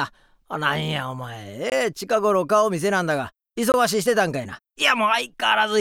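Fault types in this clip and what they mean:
Gap between chunks: the audio arrives in blocks about 2 s long, and something in the playback or storage chain leaves a stretch of silence at each join instead of butting the blocks together. Nothing is actually missing. The sound just stops dead and picks up again. You can hear it twice here, at 1.70 to 1.72 s and at 3.72 to 3.74 s, each a 20 ms hole, spaced about one block apart.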